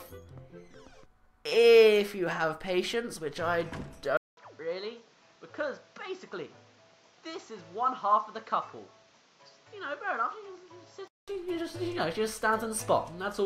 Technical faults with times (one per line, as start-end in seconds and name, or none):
4.17-11.28 input switched to a poorer device